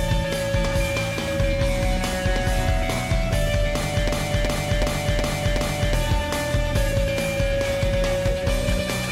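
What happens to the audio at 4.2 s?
At 4.2 s the sound locks into a stutter: the same fragment, about 0.37 s long, repeats exactly five times at roughly 2.7 per second from 4.09 s to 5.94 s. This is a system hang loop. The computer or its audio driver stalled while the sound hardware kept replaying one ring buffer, whose length fits a 16384-sample buffer. When playback resumes, about two seconds of audio have been lost.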